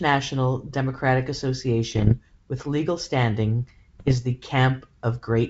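Speech with pops and rough, level-jumping bursts from 1.92 to 2.14 s, just before "with legal standing", and from 3.99 to 4.18 s, just after "with legal standing": bit errors on an ADPCM link, roughly one percent and 0.7 percent, with each flipped bit throwing off the decoder's step size and predictor.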